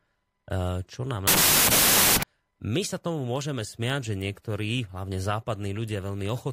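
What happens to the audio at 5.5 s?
Nothing goes wrong at 5.5 s; the speech carries on intact through that moment.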